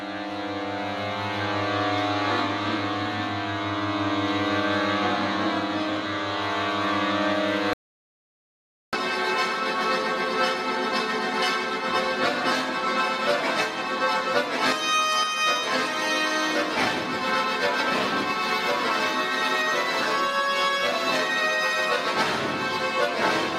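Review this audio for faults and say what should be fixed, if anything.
An audio dropout to silence runs from 7.73 s to 8.93 s. The sound cuts off mid-flow. For 1.2 s there is only silence, with no room tone. The input was likely lost while recording continued. Secure all connections and monitor input live during capture.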